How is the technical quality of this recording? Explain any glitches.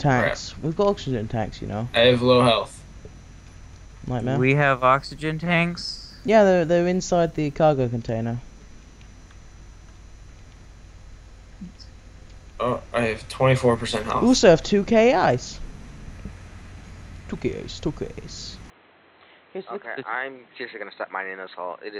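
One glitch: at 18.7 s the input likely switched to a poorer device, so the sound suddenly loses everything above 4.1 kHz, drops about 10 dB, and gains faint new background noise.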